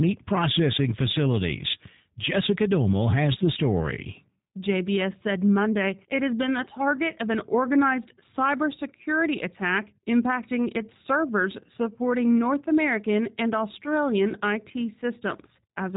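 From start to finish the speech passes through a G.729 codec, audibly damaged, at what sounds like 8 kbit/s. Each frame is resynthesised from a filter, pitch predictor and sparse pulses, leaving a rough, synthetic edge, and nothing reaches above 3.8 kHz.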